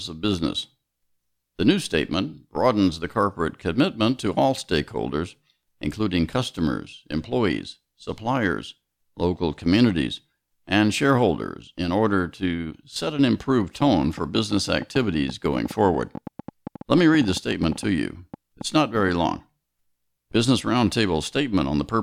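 Interference from nearby equipment or a faulty connection is likely injecting pulses from 13.81 to 19.27 s, just after "to set an improved": a train of clicks, around fifty at an uneven 8.8 per second, ticking a few dB above the speech and into its pauses.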